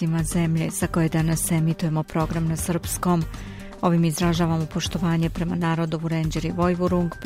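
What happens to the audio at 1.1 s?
Nothing goes wrong at 1.1 s: the audio carries on intact through that moment, with no dropout, click or distortion.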